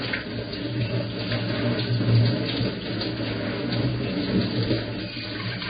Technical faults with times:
0.00-5.69 Vorbis compression

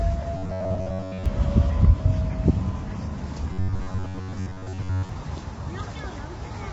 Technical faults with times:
0.00-6.73 low-delay AAC compression
0.37-1.26 robotic sound from repeated short buffers
3.53-5.09 robotic sound from repeated short buffers

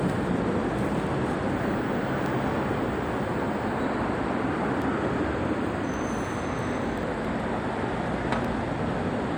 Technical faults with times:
0.79 dropped samples
2.26 dropped samples
4.82 dropped samples
5.94 dropped samples
7.25 dropped samples
8.45 dropped samples

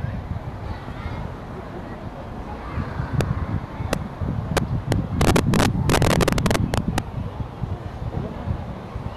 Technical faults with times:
2.75 compressed frames skipped
3.21 integer overflow
3.93 integer overflow
4.57-6.98 integer overflow

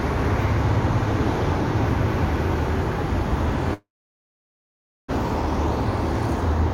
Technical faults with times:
3.74-5.14 long network dropout

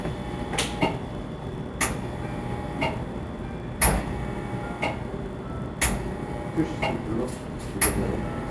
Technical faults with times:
0.00-8.50 resampler restarted on every block

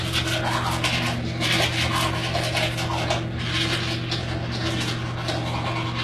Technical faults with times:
0.00-6.04 HE-AAC compression

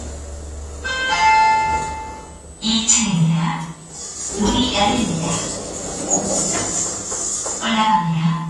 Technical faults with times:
0.00-8.49 AAC compression

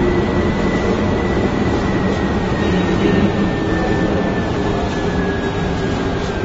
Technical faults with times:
0.00-6.45 AAC compression

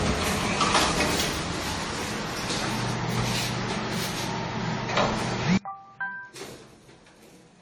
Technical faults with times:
0.00-7.61 generation loss
5.58-7.61 audio dropout to a faint residue

